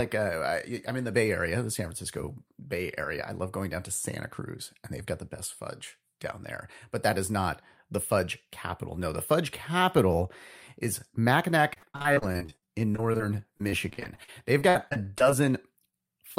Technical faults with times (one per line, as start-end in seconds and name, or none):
11.73-13.21 repeated packet loss (robotic sound)
13.57-15.48 repeated packet loss (robotic sound)
15.90-15.95 short concealed packet loss
16.35-16.38 short concealed packet loss